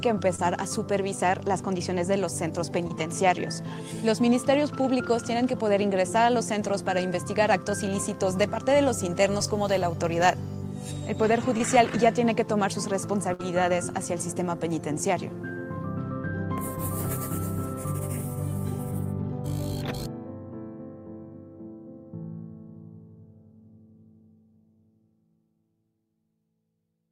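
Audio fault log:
0.35 s, 2.88 s and 11.58 s: short concealed packet loss. Each time about 20 ms of audio failed to arrive in time. The receiver covered the hole by extending the sound just before it, for about 20 ms, and then crossfaded back into the real signal. Each event lasts about 40 ms in all. It comes across as a quick smear or small wobble.
13.33 to 13.41 s: burst of packet loss. Several packets in a row went missing, about 60 ms of audio. The receiver stretched the preceding sound across the gap for about 56 ms and let it fade as it went. This gives a brief held buzz or dying hiss. The audio then picks up again further along, and the 60 ms in between is simply gone.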